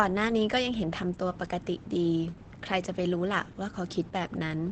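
The whole clip carries plainly audible Opus voice compression: SILK-style coding that fits about 12 kbps, nothing above 8.7 kHz, leaving the speech muffled and hoarse.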